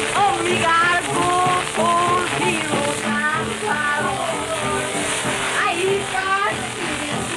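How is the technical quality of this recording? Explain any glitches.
The recording has one clear fault. Channel delay (comb filtering) runs from 3.00 s to the end: one channel lags by around 20 ms, so the mono sum cancels at evenly spaced frequencies starting near 20 Hz. The sound turns rough or slightly doubled.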